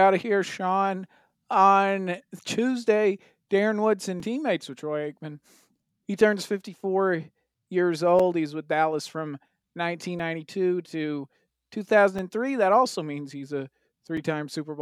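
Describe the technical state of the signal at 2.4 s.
At 2.4 s the signal is intact, with no dropout, clipping, glitch or other fault audible at that point.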